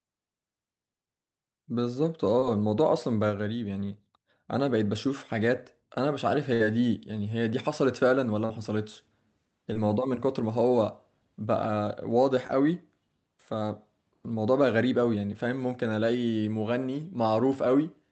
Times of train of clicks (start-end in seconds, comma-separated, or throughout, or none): none